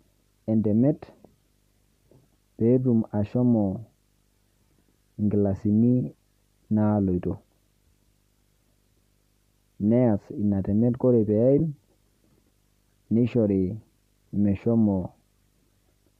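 A low 50 Hz buzz with a thin hash above it runs under the speech for the whole clip, well below the voice, with a faint whistle at 15.6 kHz on top. This is video or display buzz: a screen or video cable couples into the audio at the picture's field and line rates.

From 11.58 to 11.60 s the speech briefly turns to a grainy, noisy smear for about 15 ms. These are lost LE Audio frames, which fits two missing 7.5 ms frames. The LC3 decoder, likely running its light 64 kbps compression here, papered over the gap by repeating the last spectrum with scrambled signs.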